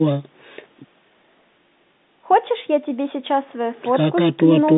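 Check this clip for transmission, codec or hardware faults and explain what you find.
Nothing here points to a transmission, codec or hardware fault: the speech comes through as an ordinary G.711 telephone call, with the narrow phone band cutting the highs and the call microphone processing trimming the deepest bass, which is exactly how such a line is meant to sound.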